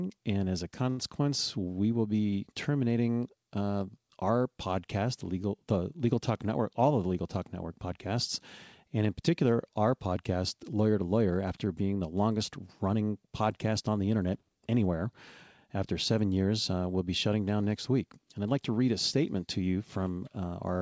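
At 0.90 to 1.00 s, a short stall from a late packet: the jitter buffer ran empty, so the receiver stretched the last speech sound by 78 ms, then resumed with nothing lost. A spectrogram shows flat, frozen harmonics, and the waveform repeats one cycle shape.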